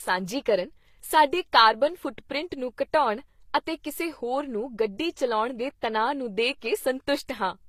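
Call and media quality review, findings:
Speech, throughout: stacked codec artefacts, flat spectrogram ceiling at 14.9 kHz. Likely transcoding between lossy codecs, low-rate HE-AAC-like source re-encoded as Vorbis, which keeps the first codec's damage.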